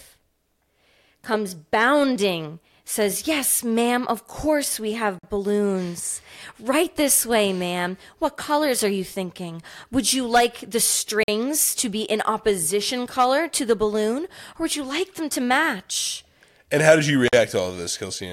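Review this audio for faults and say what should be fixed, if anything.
Gap between chunks: 48 ms silences at 5.19 s, 11.23 s and 17.28 s, inserted at each 6-second chunk join without losing sound. Join chunks seamlessly, removing padding and per-chunk playback start delay.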